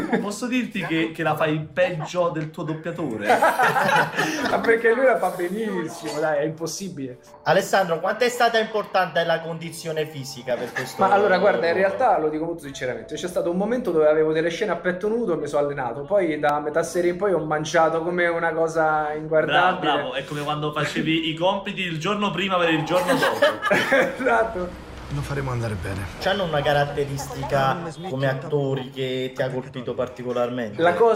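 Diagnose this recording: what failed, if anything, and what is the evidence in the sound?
Overlap between stream segments at the playback stage: tiny skips at 4.51, 10.51, 16.49 and 22.48 s, six seconds apart, where overlapping time stamps make the player trim away audio that was not really doubled, leaving waveform discontinuities and thin vertical spectrogram lines.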